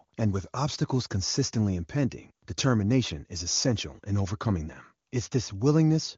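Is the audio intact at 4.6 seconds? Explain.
Yes, the audio is intact at 4.6 seconds, with no fault to be heard at that moment.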